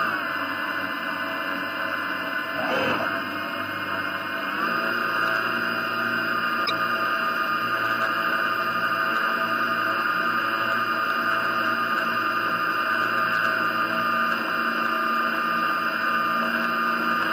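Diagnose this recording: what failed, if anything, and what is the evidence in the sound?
Damaged data in the compressed stream: the decoder misreads corrupted frames and loses sync, producing a brief disturbance from 6.62 to 6.71 s.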